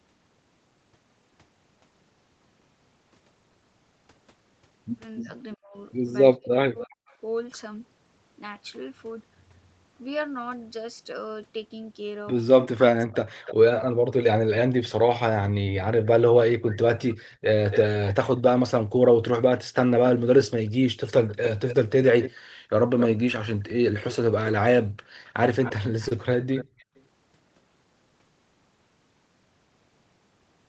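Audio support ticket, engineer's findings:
Speech suppressed in double talk. Talker dips by about 40 dB at 5.22–7.12 s and 12.75–14.51 s, roughly a second lost in each. Brief dropouts at 21.26–26.48 s. Likely the echo canceller muting both sides during overlap.

Echo leak. Delayed copy of the voice at 5.51–7.15 s, 305 ms late, about 35 dB down. Again at 12.61–27.02 s, 267 ms late, about 10 dB down. Likely residual echo from a far-end loudspeaker.

Background gated by the echo canceller. Room sound drops by about 40 dB in short bursts between 22.41 and 26.88 s. Well under a second in total. The canceller clamps the microphone while the loudspeaker plays, then releases.

Short stall from a late packet. Sound held at 26.08–26.12 s. Jitter buffer ran dry. The receiver stretched 28 ms of audio until the packet arrived. Nothing missing. Playout delay grew by 28 ms.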